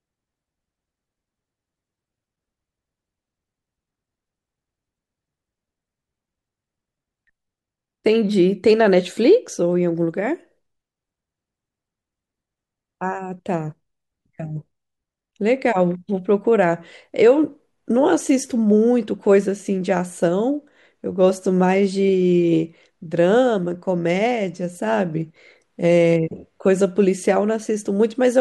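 No technical faults occur anywhere in the recording.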